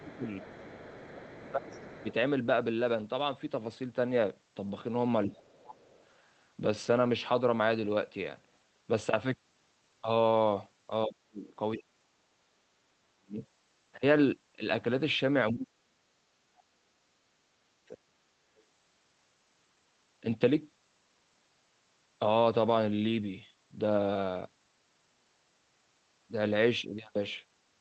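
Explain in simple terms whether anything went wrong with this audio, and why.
Two problems show up. The first is speech suppressed in double talk. From 0 to 2.08 s, 5.27 to 5.83 s, 11.06 to 13.42 s and 15.51 to 18.29 s, the speech suddenly sinks, sometimes almost to silence. The likely cause is an echo canceller that heard both sides at once and turned everything down.

The second is the other side's voice leaking through. A faint second voice appears from 0.12 to 2.14 s, 5.86 to 6.04 s and 18.57 to 18.63 s. It is most likely a loudspeaker's sound that the echo canceller didn't fully remove from the microphone.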